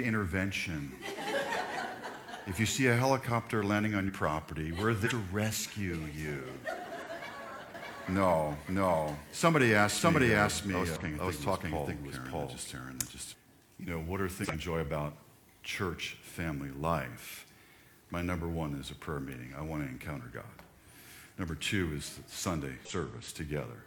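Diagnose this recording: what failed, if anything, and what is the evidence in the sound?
The codec or storage stage is dropping compressed frames. At 4.04, 5.02, 6.92, 10.96, 14.40 and 22.81 s the sound jumps forward, losing roughly a tenth of a second, then around 0.3 s, a twentieth, about 0.15 s, another 0.3 s and a tenth again. These are whole frames that went missing or that the decoder rejected as corrupt.

There's also a doubled audio track from 7.74 to 13.34 s. A second full-band copy runs roughly 0.7 s behind the first at about the same level, with no decay or room colour. It cuts in and out abruptly at both ends. The likely cause is the signal being picked up twice, with one copy arriving through a slower path, or an edit that left two unaligned copies stacked on top of each other.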